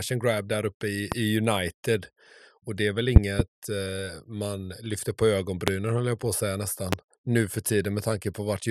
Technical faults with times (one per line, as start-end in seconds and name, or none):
1.12-1.15 loud pop
3.16-3.42 loud pop
5.68-5.70 loud pop
6.93-6.95 loud pop